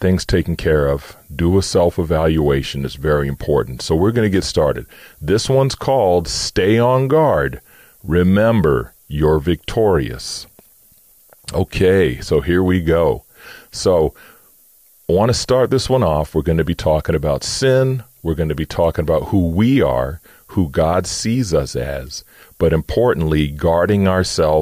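A steady, thin hiss runs under the speech from start to finish, brightening sharply toward the top of the band and sitting roughly 30 dB below the signal. This is low bit depth with noise shaping, consistent with about 9 bits, where the rounding error is pushed upward in frequency.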